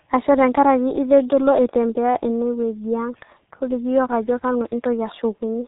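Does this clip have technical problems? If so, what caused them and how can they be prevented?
Yes: throughout, a G.723.1 codec cuts everything above 3.8 kHz and heavily smears consonants, consistent with roughly 6 kbit/s coding. Prevent it by using a wideband, higher-bitrate codec.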